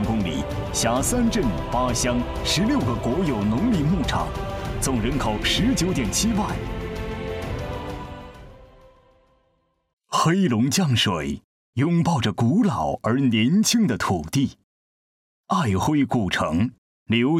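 Nothing stood out as a technical problem on listening.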